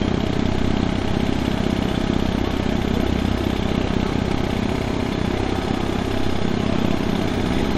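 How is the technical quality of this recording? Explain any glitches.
The recording is technically sound, with no glitches or signal faults to be heard anywhere in the audio.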